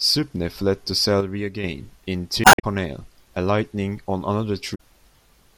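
From 1.21 to 1.64 s the speech abruptly drops by about 6 dB, then returns to full level. The likely cause is one channel dropping out: one stereo channel goes silent, so the mono sum loses half of the material both channels shared.

At 2.41 to 2.64 s and again at 4.72 to 4.81 s, brief glitches break into the speech. This is damaged data in a compressed stream. The decoder cannot read the corrupted frames, loses sync and skips ahead to the next valid frame header.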